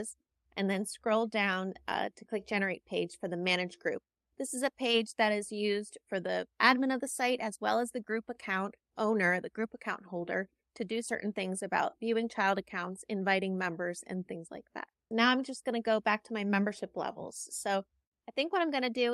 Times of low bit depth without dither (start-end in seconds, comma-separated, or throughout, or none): none